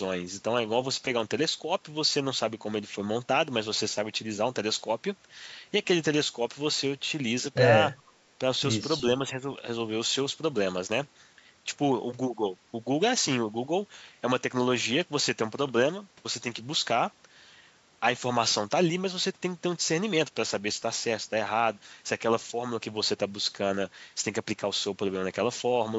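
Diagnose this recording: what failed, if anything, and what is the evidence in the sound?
At 7.99 to 8.03 s the speech briefly dips by about 10 dB for roughly 40 ms, at the call-processing stage. This is likely speech suppressed in double talk: the echo canceller mistook the talker for loudspeaker echo and attenuated both. It dips rather than dropping to silence, without the click or gap of a lost packet.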